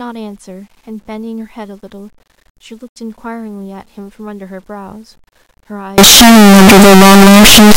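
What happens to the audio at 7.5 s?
At 7.5 s the speech is inside a stretch of harsh, very loud distortion running from 5.98 s to the end, where quiet moments blare as loudly as the rest. That points to signed and unsigned mixed up, likely 8-bit samples read with the top bit flipped, so every zero crossing jumps across the whole range. Unlike ordinary clipping, the quiet parts get loud too.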